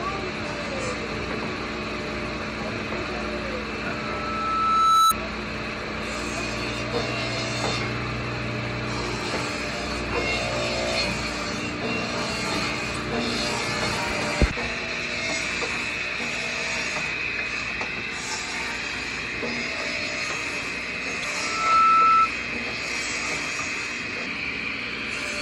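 At 3.90 s a loudspeaker feedback squeal begins. A microphone is hearing its own loudspeaker, and the loop gain passes one at 1.3 kHz. The tone swells over about a second to roughly 10 dB above the sound. It stops at 5.25 s.

Damaged data in the compressed stream causes brief blips at 5.08 to 5.12 s, 12.93 to 12.97 s and 21.21 to 21.25 s. Corrupt frames make the decoder lose sync. Each glitch lasts about 40 ms while it finds the next valid frame.

At 21.35 s the 1.3 kHz feedback squeal returns. It builds faster this time, in under half a second, and lasts until 22.30 s.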